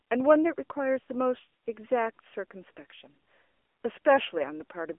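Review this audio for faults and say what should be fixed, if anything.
The whole clip has been through the AMR narrowband mobile codec. Nothing makes it above about 3.5 kHz, the band sits roughly between 300 Hz and 3.4 kHz, and the speech has that buzzy, synthetic edge a vocal-tract model gives when it's starved of bits. The damage is plainly audible and fits a low mode of around 8 kbps. To prevent it, record or route the call over a wideband path, or at least use a higher AMR mode.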